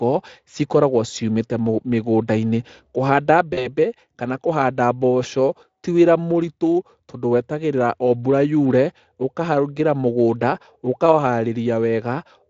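At 3.53 s the speech breaks up in a burst of VoIP packet loss concealed by the speech codec. About 40 ms of audio goes missing, which fits two 20 ms frames, and the decoder fills the hole by extending its last pitch and spectral envelope at falling gain. The result is a brief stretched sound that fades. Because each rebuilt frame feeds the next, the weak, distorted quality lingers until about 3.76 s, just before "kana kũhanda mboco ti", against the light, faint hoarseness of the Speex coding.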